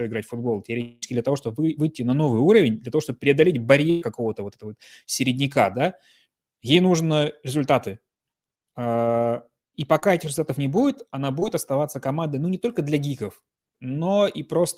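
A speech clip with four places where the sound breaks up. From 0.81 to 1.04 s, the last sound is held and stretched into a buzzy or hissy, fading tail for about 0.2 s. No silence follows. When the speech returns, it has skipped ahead by about the same 0.2 s. This is likely a long network dropout, with the receiver filling the whole gap by extending what it last heard. At 3.90 to 4.03 s there is a shorter version of the same thing, a burst of packet loss. About 0.12 s of audio is gone. In its place, the preceding sound carries on for roughly 115 ms and fades as it goes. The speech then resumes further along, with the lost section simply missing. Two brief glitches follow, at 9.99 to 10.04 s and 11.40 to 11.44 s. Each is short concealed packet loss. About 20 ms of audio failed to arrive in time at each point. The decoder patched the hole with a continuation of the sound just before it, then blended back in. 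The result is a quick smear or wobble rather than a clear gap.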